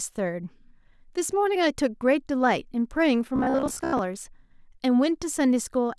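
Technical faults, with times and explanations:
3.36 to 3.99 s, robotic sound from repeated short buffers: fresh audio likely stopped arriving in time, so the playback side kept looping its last short chunk, about 15 ms long, in place of the real signal, and most of this stretch is repeated material rather than new sound. Looping at that length imposes a steady pitch near 67 Hz, so the speech collapses into a rigid, metallic buzz that only loosely tracks what is being said.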